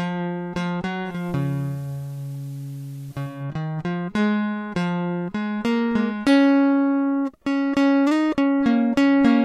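From 1.02 s to 3.46 s the music goes through a digital radio blending to analogue: the receiver loses the digital stream and cross-fades, over about 250 ms, to the FM broadcast of the same station, then fades back. During that stretch the top end stops near 15 kHz, the usual FM limit, and a hiss floor rises to roughly 35 dB below the music. The level stays matched across both transitions, so the change is heard mainly as duller treble and added noise.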